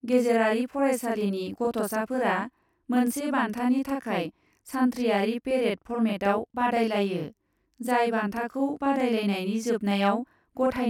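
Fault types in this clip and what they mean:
Channel delay (doubling): All the way through, the speech has a thickened, doubled quality, as if each syllable is spoken twice in very quick succession, with the second copy arriving as a short slap at the same loudness as the first. This happens because one channel runs about 40 ms behind the other, and when the two are summed to mono the late copy is heard as a distinct repeat rather than blending in.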